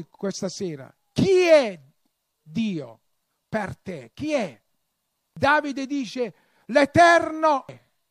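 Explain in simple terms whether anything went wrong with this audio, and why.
Two brief glitches interrupt the speech, at 5.37 s and 7.69 s, each a short chirp or blip. They come from damaged data in a compressed stream: part of the stored file was corrupted, so the player misread that stretch and had to hunt for the next clean chunk before carrying on.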